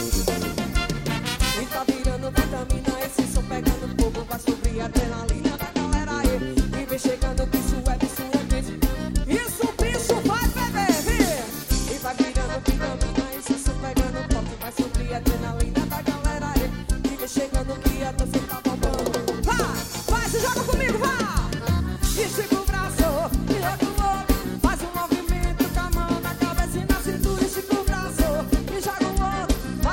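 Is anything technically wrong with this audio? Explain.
Yes. There are three Bluetooth SBC bit pool drops, at 4.66 to 6.27 s, 11.68 to 14.76 s, and 28.85 s to the end. Each time the link carries fewer bits. The sound fits a bit pool falling from 31 to 12, near 88 kbps. The top sub-bands get little or nothing, so the treble goes dull. The remaining bands are coarsely quantised, which adds a gritty noise. Clarity returns when the rate recovers.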